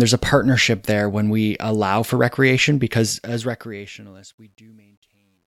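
From 3.04 s, right after "we allow for recreation", the fade-out shows truncation distortion: the level stage keeps only about 11 bits and adds no dither, so as the speech falls toward the smallest step it is rounded into coarse stair-steps and turns gritty, worst from 4.21 to 5.51 s. On a waveform the quiet tail looks blocky and stepped. On a spectrogram, broadband grainy energy clings to the decaying speech instead of a clean fall into silence.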